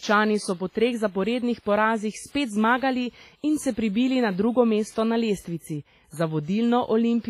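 Low-bitrate audio saved at a high bitrate affects this speech clip throughout. Nothing is heard above 15.5 kHz, and the damage from an earlier, very low-bitrate encoding remains, likely because a 24 kbit/s WMA file was re-encoded as 192 kbit/s MP3, which cannot restore what was removed.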